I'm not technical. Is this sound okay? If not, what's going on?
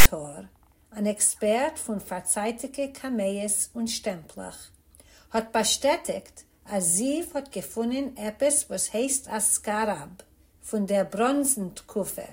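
No. Right at the start, from 0.00 to 0.06 s, there's a short harsh rasp followed by a moment of dead silence. This is file tags played as audio: the file's text labels and blank padding were read as sound. Its hard-edged rasp and the silence after set it apart from a single click.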